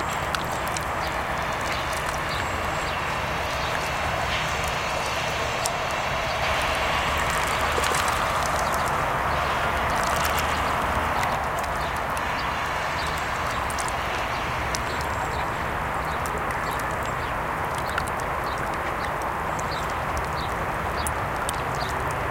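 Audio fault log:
6.42–11.36 s, doubled audio track: a second copy of the sound runs about 150 ms behind the first, at roughly the same level, so every onset is heard twice as a crisp slapback. The copy spans the full frequency range with no decay or room colouring, and it cuts in and out abruptly at both ends. The likely cause is the same signal reaching the mix twice, once directly and once through a slower path.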